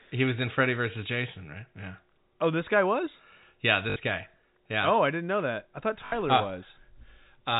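A brief robotic stutter, a buzz lasting about 60 ms, breaks into the speech at 3.90 s and again at 6.06 s. Both are packet loss with the last packet repeated: audio went missing and the receiver replayed its final good packet to fill the gap. Each 60 ms hole fits three 20 ms packets, so the replayed segments repeat at roughly 50 Hz. The speech sits in the narrow band of G.711 telephone coding.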